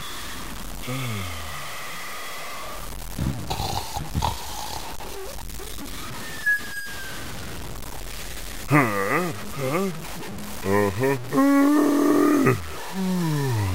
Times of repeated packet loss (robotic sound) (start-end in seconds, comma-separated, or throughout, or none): none